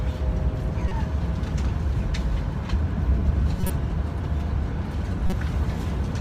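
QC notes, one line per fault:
0.85–0.92 s: corrupt frame decoded. A short blip peaking near -15 dBFS, since damaged bits across a couple of frames misplaced energy in frequency.
3.60–3.70 s: corrupt frame decoded. A louder noise burst near -10 dBFS over a few frames, where misread gains and codes put energy at wrong frequencies.
5.27–5.33 s: corrupt frame decoded. A brief squeak near -10 dBFS, from a few flipped-bit frames the decoder played anyway, spraying energy into the wrong bands.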